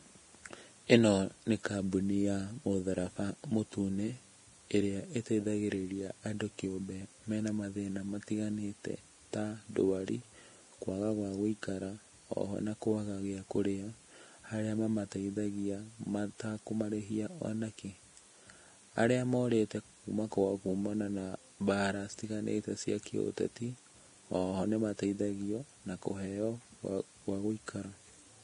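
From start to finish the speech sounds hissy and grainy, with nothing above about 10.6 kHz, sibilants turned to rough noise and consonant attacks smeared. The likely cause is heavy Vorbis compression at a setting consistent with roughly 32 kbps: the treble is quantised so coarsely that its detail is replaced by noise of similar energy. Unlike MP3 damage, the residue is a diffuse hiss rather than swirling, metallic warble, and unlike a plain low-pass filter, the band below the cut-off is also roughened.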